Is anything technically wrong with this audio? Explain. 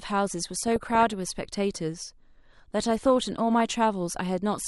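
Yes, the speech carries three faults.

Throughout, the speech sounds dull and gurgly, with a granular edge. This is MP2 compression, likely at a low rate around 80 kbps. Too few bits shut off the upper sub-bands and coarsely quantise the rest. Unlike burbling, this damage is steady rather than bursty.

From 0.40 s to 4.26 s, faint, evenly spaced ticks recur roughly every 0.4 s, about ten in all. These are clock slip clicks, likely from two unsynchronised clocks about 50 ppm apart, where one sample is dropped or repeated per slip. Their strict regularity separates them from random codec errors.

From 0.68 s to 1.13 s and again from 2.82 s to 3.60 s, short noisy blips sit over the speech. This is DAB burbling. A small fraction of bit errors slip past error correction, so wrong samples put short blips of noise in single sub-bands. It comes in bursts, unlike the constant compression dullness.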